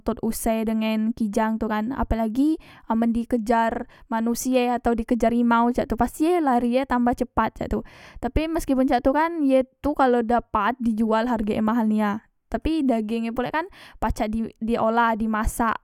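No technical faults are audible.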